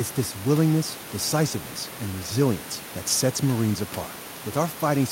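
No technical faults can be heard in this speech clip.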